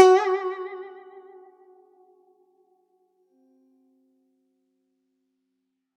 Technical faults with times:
none

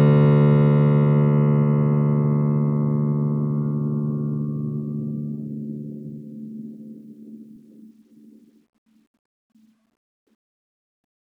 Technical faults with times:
none

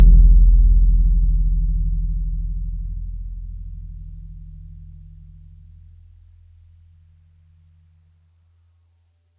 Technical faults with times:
none

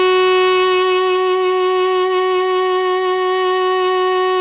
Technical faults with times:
0.00-4.41 aliasing

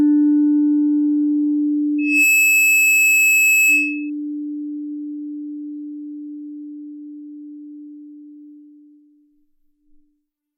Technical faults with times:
1.98-4.10 loudspeaker feedback squeal

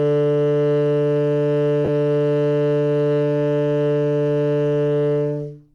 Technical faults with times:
1.85-1.89 lost LE Audio frames

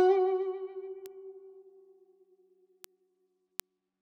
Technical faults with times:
1.06 bit error spike
2.84 bit error spike
3.60 bit error spike

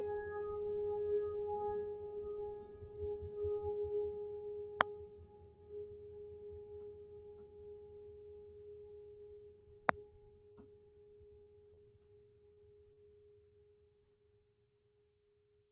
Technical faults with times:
10.52-11.80 repeated packet loss (robotic sound)
12.53-12.60 short stall from a late packet
12.93-13.00 short concealed packet loss

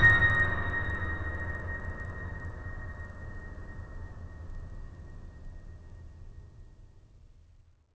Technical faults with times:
0.00-7.94 resampler restarted on every block

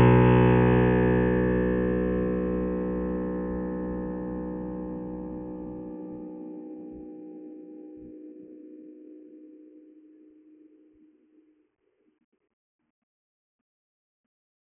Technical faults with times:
0.00-14.71 aliasing

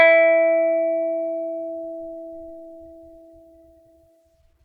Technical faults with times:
none

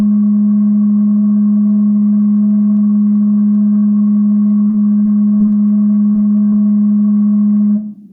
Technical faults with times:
0.00-8.12 gain pumping
4.68-5.60 repeated packet loss (robotic sound)
6.12-6.16 short concealed packet loss
6.16-6.36 jitter buffer slow-down
6.50-6.54 short concealed packet loss

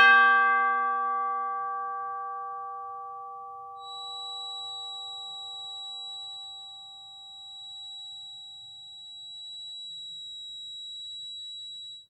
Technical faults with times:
3.74-12.10 feedback whistle

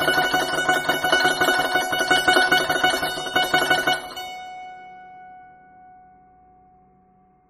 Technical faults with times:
0.00-7.50 MP3 compression

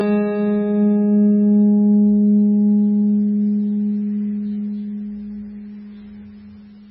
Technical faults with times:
0.00-6.91 channel delay (comb filtering)
0.00-6.91 MP3 compression

